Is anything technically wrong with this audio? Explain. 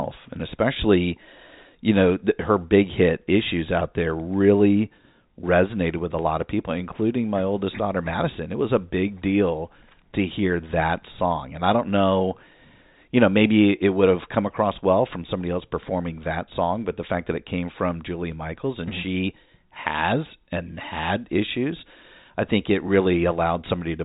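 No, nothing in this speech is technically wrong. It has the sound of G.711 telephone coding, with nothing above 4 kHz and only a faint quantisation noise that rises and falls with the level.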